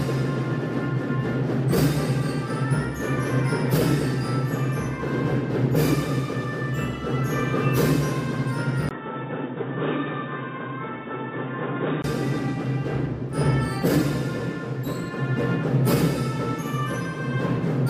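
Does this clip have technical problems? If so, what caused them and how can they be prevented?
Yes. From 8.89 to 12.04 s the sound turns dull and slightly quieter, with nothing above 3.8 kHz and a brief 20 ms gap at the change, likely an input switched to a poorer device. Locking the recording input to one microphone, and disabling automatic device switching or headset call profiles, prevents it.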